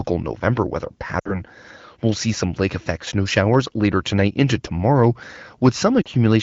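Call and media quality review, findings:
Lost AMR speech frames, 1.19–1.41 s: three consecutive frames (about 60 ms) failed checksum; the decoder reused the last pitch and vocal tract settings at falling gain. Speech fades to near silence within two frames, then returns weak and rough.

Lost AMR speech frames, 6.02–6.08 s: two frames (about 40 ms) concealed the same way. A short dropout, with thin, rough onset on recovery. Surrounding wideband audio is clear, consistent with AMR-WB around 12.65 kbit/s.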